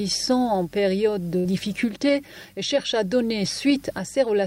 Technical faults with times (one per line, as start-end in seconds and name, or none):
1.39-1.47 burst of packet loss
1.44-1.46 lost packet rebuilt from error correction